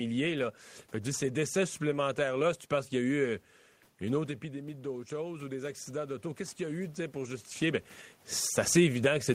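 At about 4.0 s the talker moves back and the speech drops by about 10 dB at the microphone. From 4.19 s to 7.52 s the automatic gain rising fault follows: the gain control treats the quieter input as a level problem and lifts its gain by about 6 dB over those three seconds. Speech and room noise swell together. On a waveform the envelope climbs steadily, and on a spectrogram the noise floor brightens along with the speech, until the talker moves again near 7.5 s.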